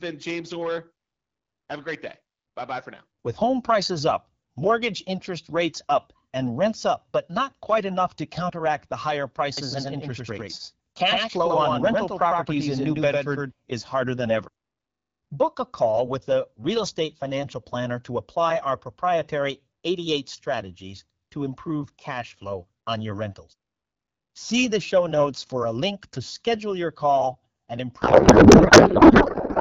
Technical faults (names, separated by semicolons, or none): doubled audio track; codec payload misread